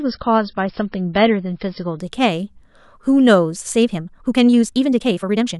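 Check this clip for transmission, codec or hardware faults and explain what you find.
Two faults are audible in this speech clip.

From 0.0 to 2.0 s, the adaptive stream starts at a low bitrate. Nothing is heard above 5.5 kHz, and codec artefacts are stronger. The sound fits MP3 at 24 kbit/s. At 2.0 s it jumps, with no gap, to a cleaner stream consistent with 128 kbit/s.

From 3.8 s to the end, the speech suddenly runs about 1.65 times faster with unchanged pitch. It sounds rushed. The likely cause is a time-stretched section, where software squeezed the audio by dropping short pieces to keep the pitch.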